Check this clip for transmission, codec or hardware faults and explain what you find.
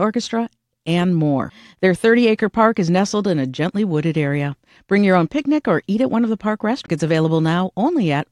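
One hardware fault turns up, a single CD skip.

At 6.86 s, just after "one of the park", the laser jumped to another turn of the disc's spiral. Playback mutes for only a moment, around 15 ms, then resumes elsewhere, heard as a tick and an abrupt jump. A waveform shows a brief flat gap with a discontinuity, and a spectrogram a thin vertical broadband line.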